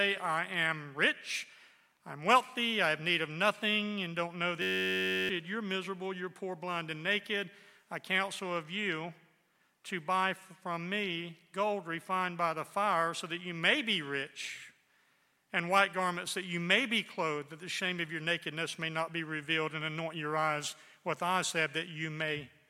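At 4.62 s the audio freezes into a system hang loop that lasts until 5.29 s. The machine stalled while the sound hardware kept replaying its ring buffer. One 10.67 ms slice repeats exactly, about 63 times. That fits a 512-sample buffer. Because the loop is so short, it sounds like a steady buzz at 93.8 Hz rather than a stutter. Roughly 0.7 s of the original audio is lost.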